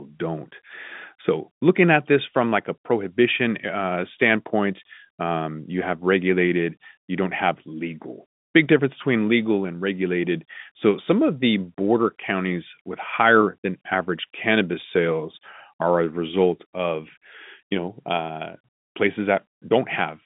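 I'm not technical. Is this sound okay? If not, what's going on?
Yes, this sound is okay; it's the ordinary narrow sound of a phone line, with nothing going wrong in it.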